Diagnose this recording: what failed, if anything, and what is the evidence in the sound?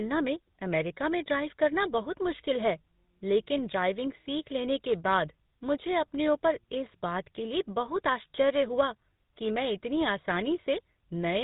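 At the codec stage, the call was decoded and re-encoded across links with different speech codecs. The sound fits a 40 kbit/s ADPCM hop followed by GSM full rate. This tandem speech coding runs throughout: nothing above 3.8 kHz, with stacked roughness, muffling and warble.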